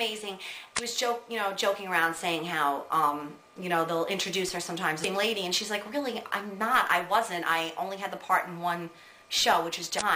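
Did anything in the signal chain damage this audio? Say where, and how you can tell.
Yes. The damage is at the codec stage: damaged data in a compressed stream. Three brief glitches break through at 0.75–0.79 s, 5.01–5.05 s and 9.97–10.02 s, each only about 45 to 55 ms long, heard as short chirp-, click- or dropout-like glitches. Corrupted bytes in those frames leave the decoder misreading them and losing sync until it finds the next valid frame header, so it briefly outputs garbage.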